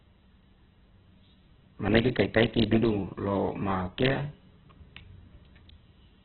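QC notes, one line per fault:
Throughout, Opus compression: the speech is heavily damaged, rough and grainy, with a noisy, hissy texture where clean tones should be. Nothing sounds above 4.4 kHz, so the audio is narrowband and dull. The likely cause is Opus in its music mode at a very low bitrate, which fits about 8 kbps. With so few bits, the encoder fills starved bands with folded or noise-like content, and it trims off the top of the spectrum.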